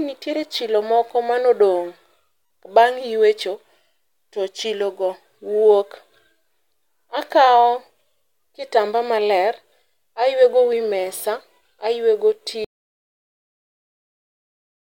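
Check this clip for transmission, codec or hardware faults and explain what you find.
One fault appears. At 12.65 s the speech suddenly gives way to an audio dropout to silence that runs about 2.3 s to the end: silence with no room tone, likely from a lost input or link, shown as a flat waveform and a blank spectrogram.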